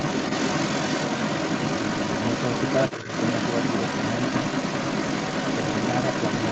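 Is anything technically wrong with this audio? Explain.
Yes, there are two faults, both tied to echo handling on a call.

Throughout the clip, from 0.0 to 6.51 s, the other side's voice is leaking through, at roughly the same level as the talker. The likely cause is a device playing the far end on a loudspeaker, with the echo canceller failing to strip that signal from the microphone pickup.

From 2.97 to 3.08 s, speech is suppressed in double talk: the talker dips by roughly 10 dB for about a tenth of a second. Both sides were likely talking at once, and the canceller, unable to separate them, attenuated everything. The band-limiting to 8 kHz comes from ordinary call microphone processing.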